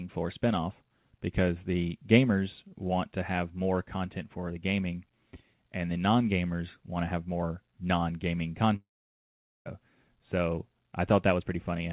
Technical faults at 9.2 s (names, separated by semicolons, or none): long network dropout